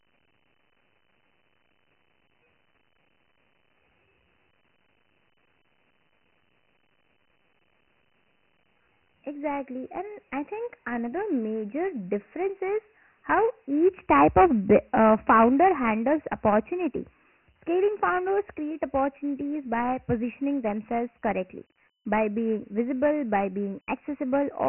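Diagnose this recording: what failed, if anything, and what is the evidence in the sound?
The codec stage failed: the speech throughout carries Dialogic VOX ADPCM damage. Nothing sounds above 3 kHz, which fits 4-bit samples at 24 kbps and a 6,000-sample rate. Heavy step-size errors leave gritty hiss tracking the speech envelope. A spectrogram shows a hard 3 kHz ceiling with grainy noise filling speech regions.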